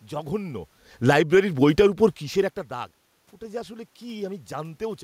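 From 0.93 s the speech is hit by automatic gain falling. The gain control judged the input too loud or its background noise too strong and eased its gain down by about 4 dB. Voice and room noise sink together. The drop settles at 2.63 s, just before "দাগ ওটা যে আসলে".

Overlapping this, automatic gain rising runs from 1.26 to 2.29 s. The input level had fallen by about 19 dB, so the control pushed its gain up by about 7 dB. Speech and background swell together gradually. This comes near the talker's movement around 2 s.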